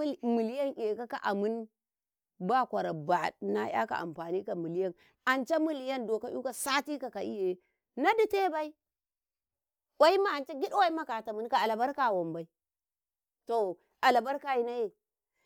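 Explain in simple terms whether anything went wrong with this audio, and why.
Nothing went wrong here: the speech recording carries no technical faults that a listener would notice at any point.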